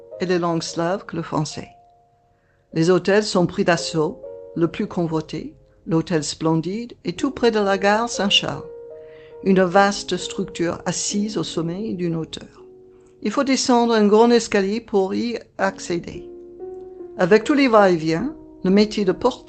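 Nothing stood out on listening to the audio as it comes through its call path.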